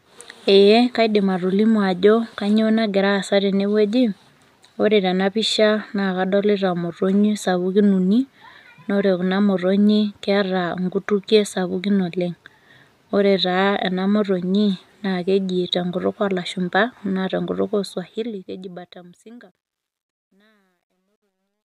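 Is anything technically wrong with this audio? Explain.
Yes. From 17.72 s to the end at 21.70 s, the speech fade-out carries truncation distortion on a fade. The level stage keeps too few bits and adds no dither, which fits a 12-bit path, so the quiet waveform collapses into coarse square steps. The tail turns gritty, worst from 19.62 s onward. Unlike steady hiss or a gate chattering, this grit grows as the level falls.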